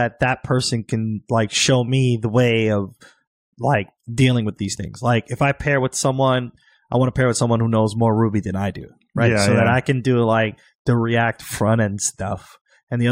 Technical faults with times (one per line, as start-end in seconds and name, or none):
none